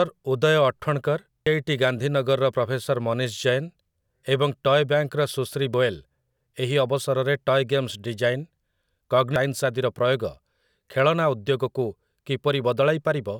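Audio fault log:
1.47 s, 5.74 s, 9.36 s: damaged data in a compressed stream. Corrupted bytes make the decoder misread frames and lose sync, producing brief blips in the speech.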